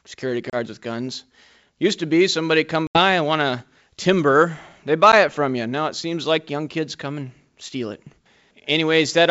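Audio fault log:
0.50–0.55 s, 2.87–2.98 s and 5.12 s: packet loss on an ADPCM call. Dropouts of about 30 ms, 80 ms and 10 ms, roughly a few packets, several packets and a single one, leave hard-edged silent holes in the speech. After each gap the receiving decoder's adaptive predictor and step size no longer match the sender's, so the speech comes back with brief distortion until the state re-converges.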